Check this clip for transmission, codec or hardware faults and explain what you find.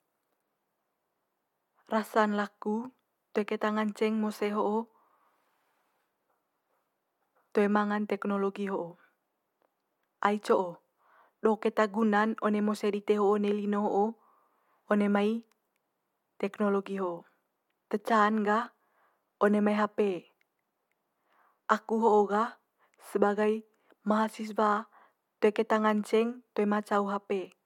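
Nothing in the transmission path, coding or hardware of this speech recording stands out as faulty to the ear.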